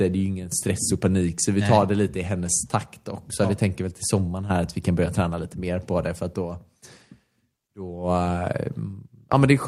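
No technical faults can be heard anywhere in the speech.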